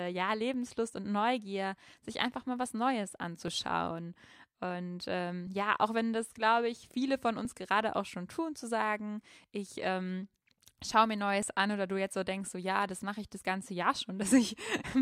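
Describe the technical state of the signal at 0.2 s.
At 0.2 s the speech signal is intact, with no dropout, distortion, clipping or other fault present at that point.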